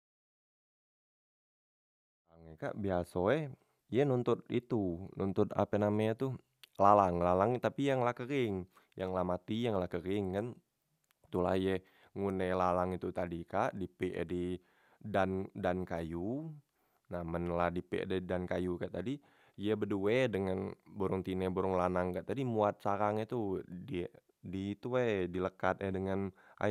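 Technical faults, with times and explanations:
No technical faults found; the speech opens with a deliberate smooth fade-in that begins at around 2 s and reaches full level at 2.89 s.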